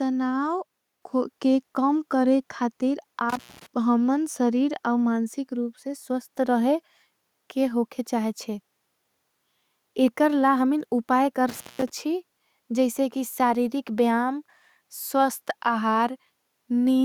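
Speech, with a microphone volume stepped up at about 1.02 s: voice and background jump together by about 4 dB, a sudden step in the waveform envelope. Intermittent contact opens the line briefly at 3.29 s and 11.49 s, each gap about 0.18–0.19 s, crackling at the edges, showing as near-silent notches with vertical clicks on a spectrogram.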